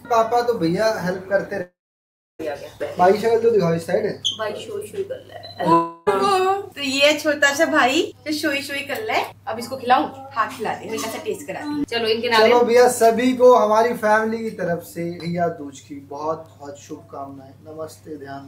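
At 1.61 to 2.41 s and 5.73 to 6.09 s the sound smears into a fading buzz, the first sinking to silence, likely a long network dropout.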